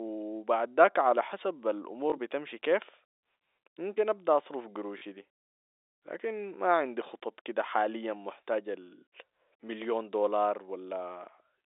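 At 2.10 to 2.12 s, a 20 ms stretch of the speech is replaced by a repeat of the audio just before it. This is packet loss with the last packet repeated, which fits one lost 20 ms packet. At 4.98 to 5.02 s, a 40 ms gap is filled the same way. Here the repeated block buzzes briefly at about 50 Hz, a short robotic stutter over the narrow telephone-band G.711 sound.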